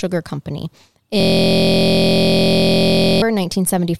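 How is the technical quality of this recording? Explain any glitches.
The recording has one serious glitch, a system hang loop from 1.20 s to 3.22 s. Something froze while the audio hardware kept replaying the same 23.2 ms chunk dozens of times, which fits a 1024-sample ring buffer. At 43.1 Hz that comes across as a steady, droning buzz.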